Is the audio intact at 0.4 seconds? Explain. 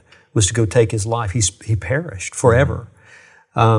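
Yes, at 0.4 s the speech plays through without any audible dropout, glitch or distortion.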